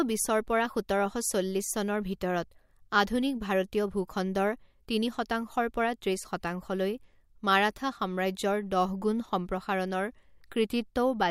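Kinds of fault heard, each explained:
No faults can be heard anywhere in this recording.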